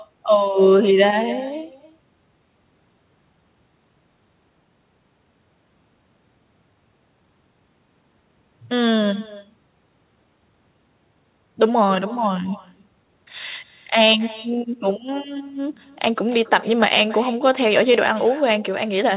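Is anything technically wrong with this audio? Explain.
Yes, there's an echo with no canceller running through the whole clip. The far end's loudspeaker feeds its mic, so this speech returns roughly a third of a second later, about 19 dB down and thin. The call path itself stops at 4 kHz, which fits a narrowband G.711-style codec.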